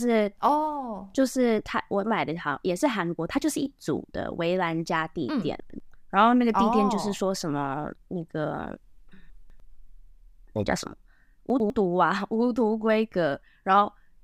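Chunks out of order at 5.6 to 5.8 s, 9.3 to 9.6 s and 11.5 to 11.7 s: a 100 ms piece of speech plays one step late, two steps late at 9.3 s, after the pieces meant to follow it. Nothing goes missing, but each spot sounds briefly jumbled across its hard joins.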